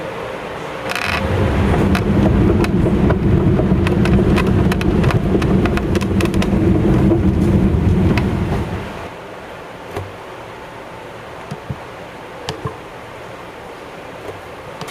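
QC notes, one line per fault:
Throughout, gain pumping: the level keeps getting pulled down each time something loud comes through, with a swing of roughly 10 dB. The likely cause is input gain set far too hot, with a fast limiter or compressor clamping down on every peak and letting go in between. That's why loud and soft moments sit so close together and the whole thing feels squashed and restless.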